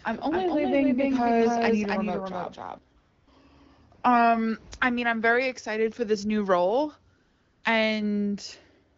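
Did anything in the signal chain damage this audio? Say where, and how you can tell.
Yes. From the very start until 2.78 s, a doubled audio track is present. A second full-band copy sits roughly 300 ms behind the first, about 5 dB quieter. It carries no decay or room colour, so it is not an echo. It stops abruptly at 2.78 s. The stage is likely capture or editing, where a slower second path or two misaligned copies got mixed together.

AMR comfort noise appears four times, at the codec stage. The phone stopped sending speech frames and the receiver filled the gaps with synthetic noise. You hear a smooth, steady hiss switching in from 2.99 to 3.27 s, 3.95 to 4.03 s, and 7.17 to 7.63 s, right after "for this new role". A final brief one lands at 8.97 s. Real background is replaced there. The AMR-WB codec at 12.65 kbit/s keeps speech clear around these gaps.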